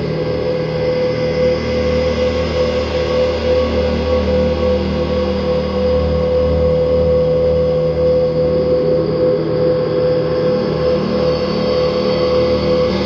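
At 12.87 to 12.93 s, near the very end of the recording, the compressed stream carries damaged data: bytes in that stretch were lost, zeroed, overwritten or mixed with unrelated data, so the decoder cannot read those frames correctly. It loses sync and hunts for the next valid frame header before decoding resumes. For about 60 ms the sound is broken by a brief disturbance of the chirp, squawk, click or short-gap kind.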